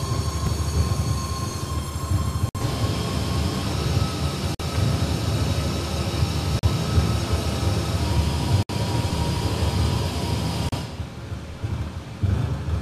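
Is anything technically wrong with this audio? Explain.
Yes. There are gaps between stream segments. The time stamps of consecutive segments, which appear to be about 2 s long, don't quite meet, so the player fills each shortfall with silence. Hard-edged dropouts break the sound at 0.47 s (very brief, about 3 ms), then at 2.49, 4.55, 6.59, 8.63 and 10.69 s, lasting roughly 60, 48, 40, 64 and 34 ms. The regular two-second rhythm gives them away. Nothing is lost; the sound simply pauses and resumes.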